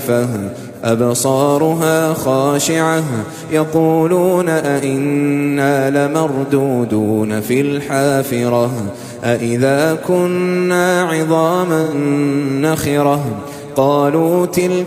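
At 11.83 s the stream suffers AAC frame loss with concealment. A run of coded data never reached the decoder, and about 85 ms went missing, which fits two lost frames. The decoder covered the gap by reusing the last good spectrum and scrambling its detail instead of leaving a hole. Until about 11.94 s the sound turns briefly smeared and noisy, with a hollow, phasey cast, and then clean decoding resumes.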